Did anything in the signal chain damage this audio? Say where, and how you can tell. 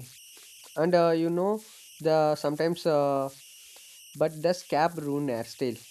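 Yes, at the converter stage. Throughout the speech there is a whistle sitting in the pauses, and under the speech it turns into a grainy, hissy texture. The tone sits somewhere around 3 kHz, and the added error runs at about 24 dB below the signal. These are converter idle tones. A delta-sigma converter running without dither settles into repeating bit patterns whenever its input is small. Those patterns produce tones whose pitch follows the input's DC offset, and that gives this whistle and grain.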